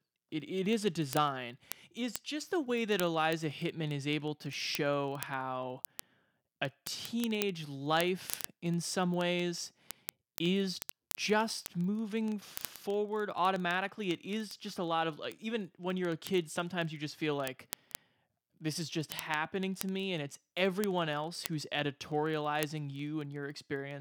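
Word clock ticks run from 0.11 to 23.98 s, one slipped sample roughly every 40 ms from an unlocked clock, evenly spaced unlike random clicks.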